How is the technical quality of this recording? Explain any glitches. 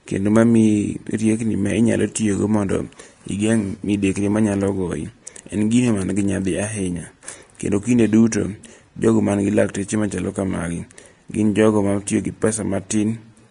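The speech has audible lossy-codec damage throughout. Nothing is present above 10.6 kHz, and the remaining treble is hissy and grainy, likely from Vorbis compression at a low rate around 37 kbps. Coarsely quantised residue turns fine detail into noise, which sets it apart from a clean low-pass that would only dull the sound.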